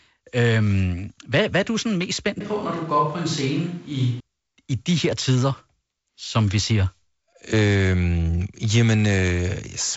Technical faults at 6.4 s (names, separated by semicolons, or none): none